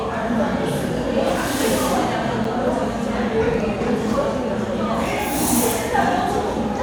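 At 2.44 s, a gap at a join of encoded pieces: an 8.5 ms silence from untrimmed encoder padding, with joins every 4 s. It sounds like a tiny dropout and shows as a thin vertical blank stripe on the spectrogram.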